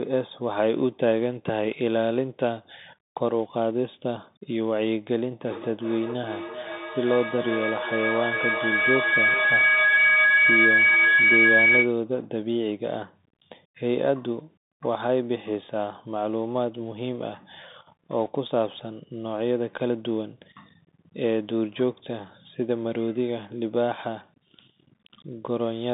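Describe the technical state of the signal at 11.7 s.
A feedback howl is running at 11.7 s; it began at 5.4 s and stops at 12.02 s, so this moment is near its end. The sound is passing from a loudspeaker back into a microphone on the same call, gaining level on every trip around the loop. The repeats have narrowed to a tone of roughly 2 kHz that pulses about every 0.4 s, the loop's round-trip delay, and peaks about 5 dB above the speech.

Underneath, the Bluetooth CVSD headset codec is present here as it is across the whole clip. The signal is confined to a line band of roughly 150 Hz to 3.7 kHz, with nothing above 3.8 kHz, which fits a 64 kbps CVSD link that codes one up-or-down bit per sample with an adapting step. The damage is plainly audible: a granular hiss under the speech, scratchy sibilants, and distortion wherever loud high content outruns the step size.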